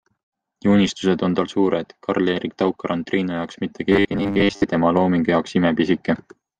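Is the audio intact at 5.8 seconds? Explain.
Yes, at 5.8 seconds the speech plays through intact, with no audible fault at that moment.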